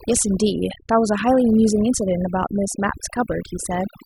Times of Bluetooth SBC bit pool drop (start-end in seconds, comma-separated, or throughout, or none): none